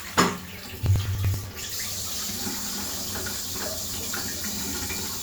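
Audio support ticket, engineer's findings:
Periodic USB or driver dropouts. A background task stalls the USB bus or audio driver every 0.096 s, from 0.09 s to 5.18 s, around fifty events. Each stall skips a few milliseconds of audio outright rather than padding with silence, so the waveform jumps across the gap. Symptom: an even tick train near 10 per second, audible only where there is signal. Probable component: USB host controller or driver scheduling.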